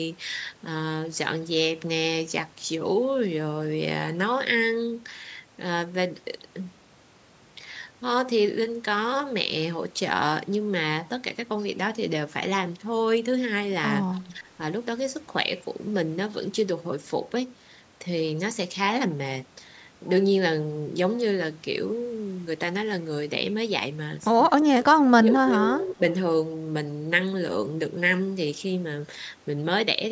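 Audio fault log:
14.14–14.21 s, echo leak: There's a brief, faint ghost of the sound, roughly 30 dB down, trailing about 243 ms behind, a little scrap rather than a sustained repeat. The likely cause is the far end playing the call through a loudspeaker, with its echo canceller letting a sliver of what its mic picked up slip through and get sent back. At that low level and short length, it registers as a faint shadow, not a clear repeat.
14.24–14.45 s and 24.49–26.02 s, speech suppressed in double talk: The talker's level sags while the other side is also talking, by around 10 dB in the first, short stretch and a deeper 20 dB or so across the second, roughly one-and-a-half-second stretch. The likely cause is the echo canceller failing to tell the local talker from loudspeaker echo, so it turned everything down. That's why the speech sounds ducked and pulled back, with nothing above 8 kHz to begin with because of the normal call band limit.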